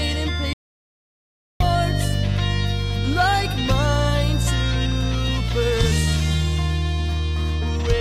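An audio dropout to silence interrupts the sound from 0.53 s to 1.60 s, cutting it off abruptly and bringing it back just as suddenly, with about 1.07 s of material gone. The gap is silent with no room tone or noise floor, which sets it apart from a natural pause or a noise gate closing. The likely cause is a brief loss of the input while recording carried on.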